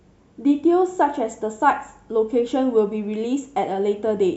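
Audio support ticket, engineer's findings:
No audible faults found in this speech recording. No component implicated and no action needed.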